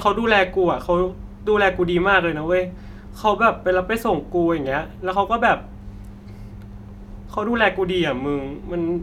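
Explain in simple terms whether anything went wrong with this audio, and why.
Nothing went wrong here: the speech recording is technically intact, with nothing in the signal that points to a problem in how it was captured, processed or delivered.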